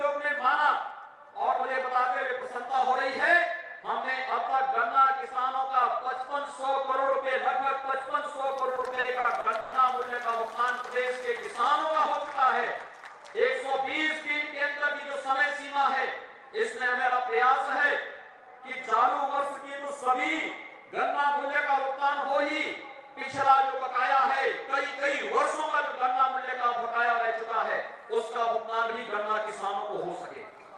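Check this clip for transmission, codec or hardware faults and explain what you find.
Three kinds of fault turn up: a GSM buzz with a stutter inside it in the middle of the clip, and two jitter buffer speed-ups near the end.

GSM phone buzz, 8.46 to 11.87 s. A 2G handset close to the audio path was transmitting in bursts at about 217 Hz, and a circuit in the chain rectified those radio pulses into the audio band. Because the phone was in a call, the buzz holds nearly steady across the span. It sits about 29 dB below the signal as a harsh, raspy drone rich in harmonics, with no relation to the audio around it.

Repeated stalls (stutter), 8.75 to 9.74 s, inside the buzz. Packets kept arriving late, so the jitter buffer emptied nine times in under a second. Each time, the receiver stretched the last sound until fresh data came in. That filled about 290 ms, roughly 29% of the span, and the longest wait was 120 ms, where the held sound fades. 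Nothing is lost, but the audio drags and catches repeatedly.

Jitter buffer speed-up, 26.21 to 28.22 s and 30.37 to 30.75 s. The buffer had built up more audio than its target, so the receiver trimmed it by cutting many short pitch-period-sized pieces in quick succession. The first stretch plays at 105% speed and sheds about a tenth of a second. The second plays at 111% and sheds around a twentieth. Pitch stays put while the pace quickens, so both passages sound hurried.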